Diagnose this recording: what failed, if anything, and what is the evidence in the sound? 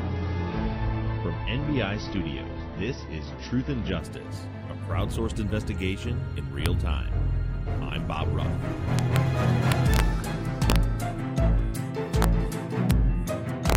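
Adaptive stream starting at a low bitrate, 0 to 4.0 s, at the network and codec stage: nothing above 6 kHz, then a sudden gapless step up, which fits a roughly 24 to 96 kbit/s AAC switch.

Integer overflow at 6.66, 8.99 to 9.16, 9.72 to 10.0, 10.70 to 10.76, 12.22, 12.91 and 13.70 to 13.75 s, in sample-format conversion: peaks only about 0 to 1 dB over full scale wrap to the opposite sign, producing violent cracks.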